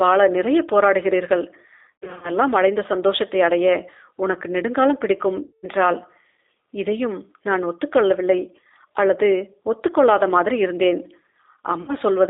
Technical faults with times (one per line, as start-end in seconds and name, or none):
0.00-12.29 G.729 codec
1.99-2.31 VoIP packet loss concealed by the speech codec
5.44-5.67 VoIP packet loss concealed by the speech codec
11.82-11.95 VoIP packet loss concealed by the speech codec